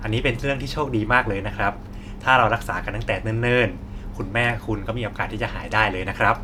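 Speech recording with no audible technical faults anywhere in the clip.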